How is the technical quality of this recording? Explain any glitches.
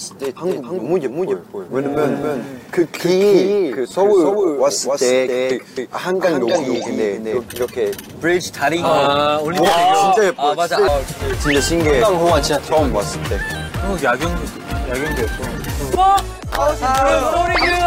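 There's one real glitch here. From 0.38 to 7.38 s there's a doubled audio track: a second full-band copy trails roughly a third of a second behind, a few dB quieter. It's likely from a slower capture path or misaligned edit, and it starts and stops abruptly, with no room decay.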